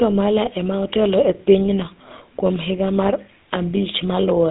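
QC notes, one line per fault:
Throughout: GSM full-rate codec. The speech has a buzzy, gravelly roughness from a coarse pulse-driven vocal-tract model, which fits a 13 kbps GSM full-rate coding. The spectrogram shows nothing above 3.8 kHz and little below 250 Hz. The harmonics look smeared and grainy rather than cleanly striated.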